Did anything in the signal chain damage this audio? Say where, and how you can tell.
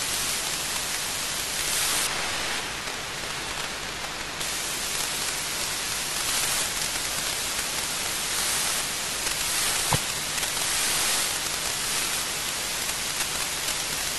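Yes: de-emphasis applied wrongly, 2.07 to 4.41 s, in processing. The speech turns muffled as a treble cut meant for pre-emphasized audio slopes down about 11 dB by 10 kHz.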